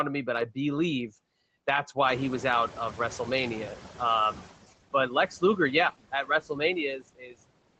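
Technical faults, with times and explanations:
Throughout: noise suppressor artifacts. The suppressor pulls down the frequency bands it judges to be steady background, frame by frame, cutting the noise by about 20 dB. The background sinks in the gaps and surfaces again beneath the speech.
2.05–4.51 s: noise suppressor catching up. Right after "but I believe that's", the room noise jumps by about 14 dB. The suppressor's noise estimate is still tuned to the quieter background, so at first the louder noise passes with only about 13 dB of reduction. Over the next 2.46 s the estimate adapts and the noise settles down. The call codec, likely Opus at a low bitrate, tops out around 8 kHz.
6.12–6.61 s and 6.99–7.38 s: speech cut by the noise suppressor. In both spots the suppressor mistakes some of the speech for background and turns it down with the noise. In the first, roughly a tenth of a second is affected, dropping by up to about 12 dB. 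In the second, about a third of a second dips by as much as about 20 dB. The affected parts sound swallowed or faint, as if trailing off.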